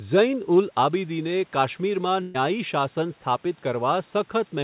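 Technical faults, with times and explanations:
2.22–2.36 s, burst of packet loss: about 120 ms of speech never arrives. The receiver stretches the last sound and fades it, so a held buzz or hiss fills the gap instead of silence, and speech resumes further on, unlike a clean dropout.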